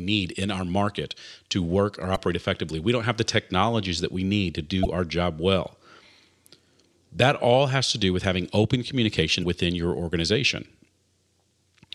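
Three short bursts of damaged data in the compressed stream interrupt the speech. Each lasts about 44 ms. The first comes at 2.13 s, after "market to work or". The second is at 4.82 s, between "that we need to" and "our job well". The third is at 9.39 s, between "do with having open" and "within your organization". In each case, corrupted bytes make the decoder misread frames and lose sync. It briefly gives a chirp, click or short hole until it finds a valid frame again.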